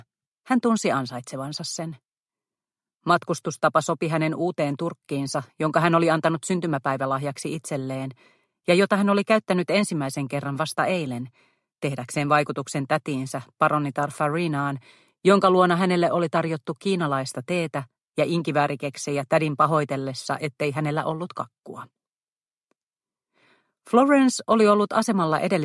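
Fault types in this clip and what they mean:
No technical faults can be heard anywhere in the audio.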